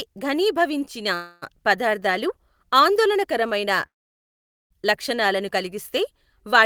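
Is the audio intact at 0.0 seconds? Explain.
Yes, the speech is intact at 0.0 seconds, with no fault present at that moment.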